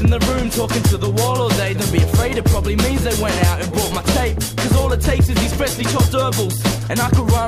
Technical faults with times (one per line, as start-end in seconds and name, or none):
none